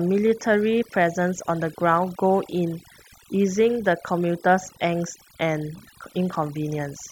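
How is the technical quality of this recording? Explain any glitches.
The main problem is overdone noise removal, which runs the whole way through. The noise reducer was pushed so hard that it switches off bands near the noise floor, so the gaps go dead with twinkly specks and quiet parts of the speech are lost along with the noise.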